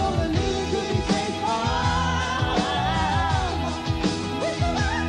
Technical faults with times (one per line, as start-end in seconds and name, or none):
none